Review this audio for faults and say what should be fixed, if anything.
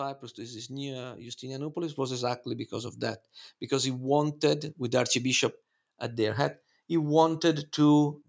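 Automatic gain rising runs from 0.35 to 3.02 s, ending just before "because he wanted with". The gain control decided the input was too quiet and ramped up by about 6 dB, so the speech and the room noise swell together. To prevent it, set a proper mic level so the AGC isn't chasing a weak signal, or turn AGC off.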